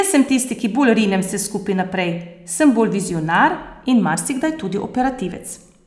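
No technical faults can be heard anywhere in this speech recording. The signal carries on without any audible problem from one moment to the next.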